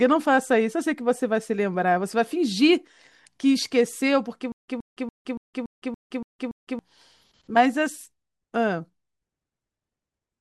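From 4.52 s to 6.79 s there's a stutter with silent gaps: a 122 ms scrap of speech repeats eight times, each followed by about 163 ms of dead digital silence, every 285 ms. That's likely a stalled stream replaying its last fragment, so the audio meant for that stretch is gone.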